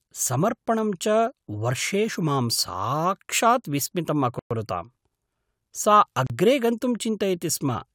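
At 4.39 s the speech drops to silence for 115 ms, then again at 6.27 s for 33 ms, resuming where it stopped, likely a Bluetooth stall from delayed packets draining the headphone buffer.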